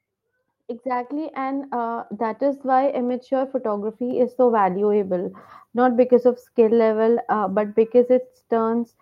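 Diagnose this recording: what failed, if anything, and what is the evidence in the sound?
Microphone volume stepped up at 1.05, 2.07 and 4.11 s: call processing raised the input gain in abrupt steps of about 4, 4 and 3 dB, lifting speech and background together.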